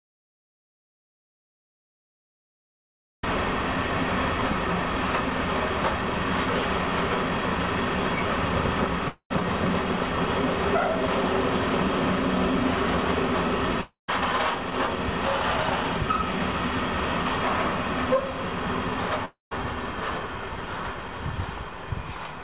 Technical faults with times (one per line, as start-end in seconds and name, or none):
0.00-3.23 audio dropout to silence
9.08-9.32 long network dropout
13.81-14.10 long network dropout
19.25-19.53 long network dropout